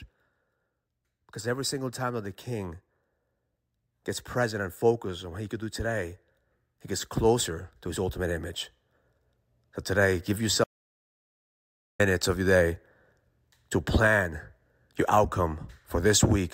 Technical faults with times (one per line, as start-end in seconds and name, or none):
10.64-11.99 audio dropout to silence